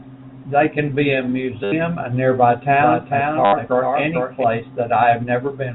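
At 1.64 s, just after "can be a" and before "a nearby", packet loss with last packet repeated replaces 80 ms of sound with one short fragment looped, which fits 10 ms packets. The run buzzes at about 100 Hz. That steady machine-like stutter separates it from a simple dropout, which would go silent.

From 2.8 s, right after "a nearby", to 4.44 s, a doubled audio track runs a full-band copy roughly 0.4 s behind, around 5 dB quieter. It is likely a second, slower capture path. Unlike a room echo it has no decay or reverberant colour, and it starts and stops abruptly.

A second repeated-packet stutter hits at 3.45 s for 80 ms, with the same 100 Hz buzz, inside the doubled stretch. The band-limited G.711 telephone sound stays steady throughout.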